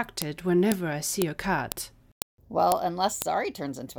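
Sharp clicks land at 0.22, 0.72, 1.22, 1.72, 2.22, 2.72 and 3.22 s, every half second regardless of the speech: a file header played as audio, where joined 0.5 s pieces kept their header bytes. Each shows as a thin spike and a vertical broadband line.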